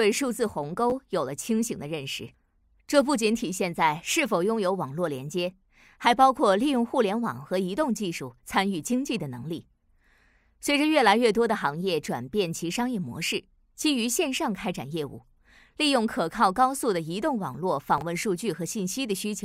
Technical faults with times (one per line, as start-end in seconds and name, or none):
0.90-0.92 chunks out of order
17.98-18.02 chunks out of order